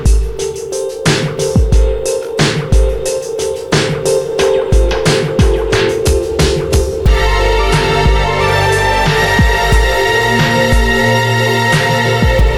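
At 2.40 s a brief crackle marks a single peak cut flat, hard clipping where the level only just touched the converter's ceiling and lost its tip.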